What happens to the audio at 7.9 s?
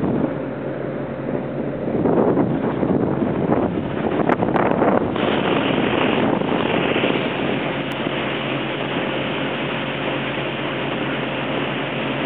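At 7.92 s there is a bit error spike. It is a single sharp tick, over almost instantly. It sounds like a digital click, with energy spread across the whole spectrum and no relation to the surrounding sound. The spike reaches about -18 dBFS. Its shape points to one flipped bit in memory or on a digital link, corrupting just a couple of adjacent samples. The value jumps by a power of two, then drops straight back.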